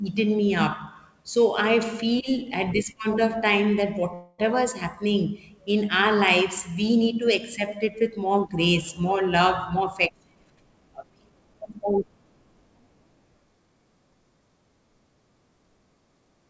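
At 4.14 s there's a call audio freeze: the sound stretches into a fading buzz for about 0.26 s, likely packets held up and the jitter buffer running dry. Nothing's lost, it just resumes late. From 9.74 to 11.61 s a jitter buffer speed-up trims tiny pitch-period slices, roughly a fifth of a second in all. The sound runs about 12% faster at the same pitch and feels rushed. Throughout, nothing sits above 8 kHz, which fits a G.722 call path.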